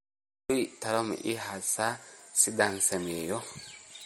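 MP3 compression damage runs throughout, plainly audible: watery, swirling speech with smeared consonant attacks, fitting a low bitrate near 48 kbps. A spectrogram shows nothing above 17.7 kHz and flickering high-frequency patches, most likely from MP3 encoding.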